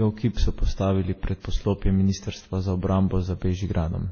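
From start to finish, a faint hiss and grainy roughness sit on the louder and brighter parts of the speech and drop away in the pauses. That is sample clock jitter: the converter's timing wanders by around half a microsecond, so each sample lands slightly off, leaving an error about 50 dB below the signal that grows wherever the waveform changes fastest.

Throughout, the speech also sounds dull and smeared, with warbling, swirly artefacts of more than one character layered together and nothing above 6.5 kHz. The likely cause is transcoding between lossy codecs, a chain ending in WMA, with each low-bitrate stage, probably in the 24 to 38 kbit/s range, spending bits on the previous stage's damage while adding its own.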